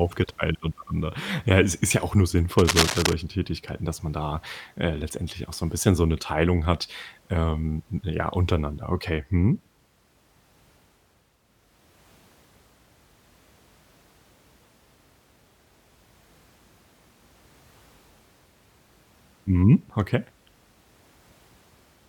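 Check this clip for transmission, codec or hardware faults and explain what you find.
One hardware fault is audible in this speech clip: cable scratch noise from 2.58 to 3.13 s, starting just after "ist ja auch nur". For about half a second, dense, irregular crackling and rustling sits over the audio at roughly the same level as the speech itself. The likely cause is a worn cable, connector or control being moved, so its contact resistance fluctuates rapidly and injects those uneven noise bursts into the signal.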